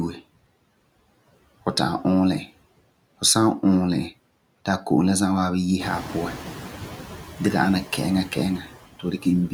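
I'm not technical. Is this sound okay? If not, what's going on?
No, there are three related problems, all coming from the noise suppressor, the processing that tries to remove background noise.

Noise suppressor artifacts run through the whole clip. The suppressor keeps turning down whatever it judges to be steady background noise, moment by moment. The leftover noise drops away in the gaps between phrases and comes back underneath the speech, so the background seems to pump.

Noise suppressor catching up happens from about 5.8 to 6.64 seconds. Around 6.0 seconds the room noise gets noticeably louder. That is real noise in the room, not a fault. The suppressor's idea of what the noise sounds like is based on the quieter background from before, so for a bit under a second the louder noise comes through only lightly reduced. Then the suppressor adjusts and the noise sinks back down.

Speech cut by the noise suppressor happens from about 8.99 to 9.26 seconds. 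Here the suppressor mistook part of the speech for background noise and turned it down along with the noise. Only a small portion, a fraction of a second, is affected, but that bit of the speech sounds swallowed and noticeably fainter than what surrounds it.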